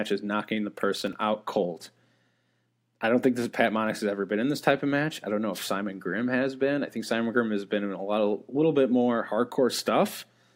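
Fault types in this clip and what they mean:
Processor overload crackle: from about 0.97 to 1.21 s the processor falls behind and misses a run of buffer deadlines, each dropping a tiny hard-edged gap of silence. Half a dozen or so short dropouts, fitting buffers of a few milliseconds, blur into a gritty crackle over the speech.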